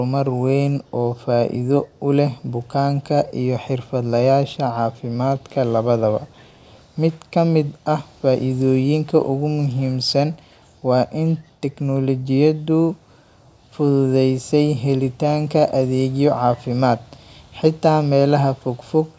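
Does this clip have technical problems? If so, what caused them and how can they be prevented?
Yes. Echo leak occurs at 0.84–0.91 s and 1.86–2.0 s. A very faint copy of the speech returns 466 ms late, likely loudspeaker playback that slipped past the echo canceller and was sent back. A headset, or lower loudspeaker volume, keeps the call's own playback out of the microphone.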